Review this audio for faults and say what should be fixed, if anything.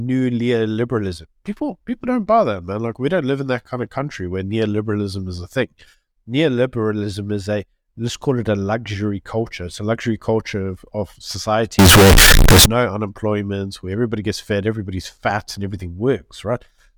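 From 11.79 to 12.66 s the speech turns harshly loud and square-edged, with background noise as loud as the voice: likely float read as integer, 32-bit float samples interpreted as 32-bit integers. Prevent it by making the reading stage declare and check the sample format before decoding.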